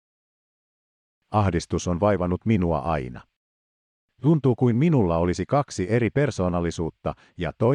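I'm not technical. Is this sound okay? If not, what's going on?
Yes, this sound is fine.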